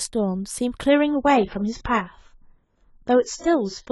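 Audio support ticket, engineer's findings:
Adaptive stream at a lower bitrate, 0.89 s to end: sudden gapless quality drop, nothing above 7.6 kHz, more codec artefacts; fits a player switch to a 16 kbit/s rendition.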